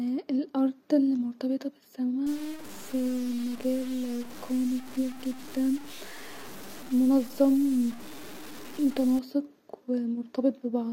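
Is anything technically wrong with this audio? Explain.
Yes. From 2.27 s, right after "الي مرتبطه", until 9.19 s, the speech turns grainy and rough, with a gritty distortion that rises and falls with the voice. Quiet syllables and word tails break up or sputter before dropping to silence. The likely cause is low bit depth without dither: the samples seem truncated to about 6 bits, leaving error only around 20 dB below the signal. On a waveform, quiet passages show visible staircase steps. A spectrogram shows broadband noise that tracks the speech and vanishes in pauses.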